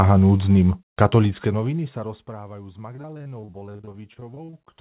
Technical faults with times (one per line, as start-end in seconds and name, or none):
2.96-4.75 repeated packet loss (robotic sound)